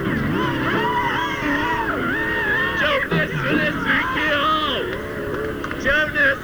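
No audible technical faults anywhere in this audio.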